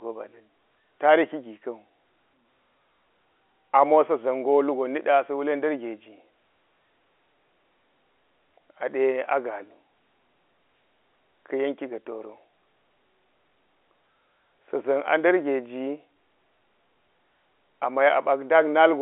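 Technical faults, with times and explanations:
The speech sits in a narrow telephone band of roughly 300 Hz to 3.4 kHz with nothing above 4 kHz, consistent with G.711 A-law coding at 64 kbps, and that line path shows nothing audible beyond its normal band limit and faint level-following quantisation noise.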